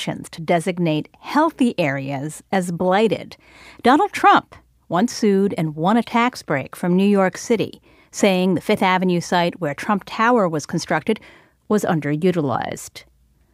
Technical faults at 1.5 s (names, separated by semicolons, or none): none